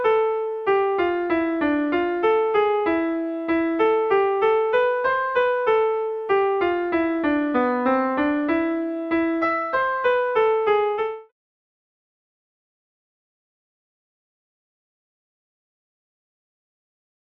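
No technical faults can be heard in the signal, and the level eases down in a smooth fade-out from about 11 s that is complete by 11.32 s, with no click or hard edge.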